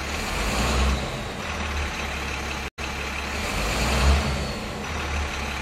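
At 2.68 s the sound drops out for 95 ms, then resumes about 0.23 s earlier, repeating a stretch: a stream reconnect, with a fresh decoder restarting mid-stream.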